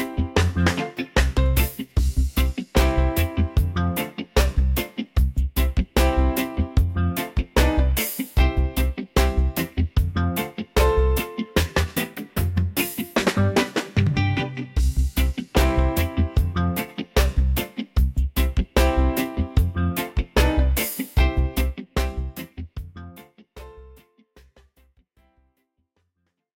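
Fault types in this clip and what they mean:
No faults detected; the level tapers out gradually over roughly the last five seconds with no click or hard edge, as an editor would fade it.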